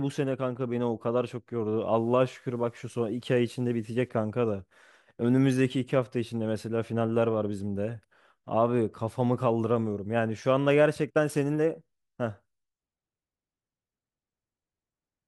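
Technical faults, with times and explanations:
1.98–4.09 s, low bit depth without dither: the speech turns grainy and rough here, with a fizzy distortion that rises and falls with the voice itself. Quiet stretches sputter or drop toward silence. The likely cause is a path reducing the audio to about 9 bits by plain rounding, with no dither to decorrelate the error. The rounding error therefore tracks the signal. It sits only around 40 dB below the speech.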